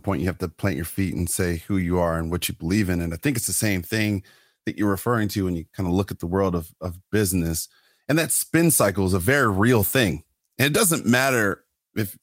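The speech recording shows no audible technical faults anywhere in its duration.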